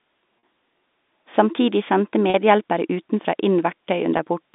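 At 0.39–0.43 s, 2.30–2.34 s and 4.17–4.19 s, packet loss with pitch repetition fills 40, 40 and 20 ms gaps by replaying the last pitch period, heard as a brief held buzz. Spectrograms show frozen harmonics; waveforms show one cycle copied repeatedly.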